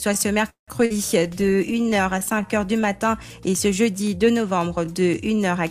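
At 0.49 s the sound stalls for about 0.21 s. A brief buzzing continuation of the last sound fades into roughly 0.13 s of silence before playback resumes where it stopped. This is a call audio freeze, likely caused by delayed packets draining the jitter buffer, which filled the wait instead of dropping audio.

From 0.86 to 0.93 s playback jumps forward. About a fifth of a second of audio is gone, and the two sides are joined almost directly. This skip ahead dropped a stretch of audio, cutting the delay by about 0.15 s.

Between 0.98 and 2.47 s the sound drags at about 91% speed with unchanged pitch. It is drawn out. This is a jitter buffer slow-down: repeated pitch periods and pause fragments added 144 ms to rebuild the buffer's reserve.

From 1.27 to 4.22 s the audio turns rough, watery and muffled, and is at its worst for about 1.02 s. This call bitrate drop came after the bandwidth estimate fell. 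It fits the encoder being pushed from around 128 kbps down to 28 kbps, coding coarsely and trimming the highs.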